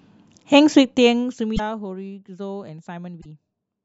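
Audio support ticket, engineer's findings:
Short garbled bursts where the speech skips ahead, at 1.56–1.60 s and 3.20–3.26 s. Likely a broken MP3 bit reservoir: dropped 26.1 ms frames leave the following frames decoding borrowed bytes from the wrong frame.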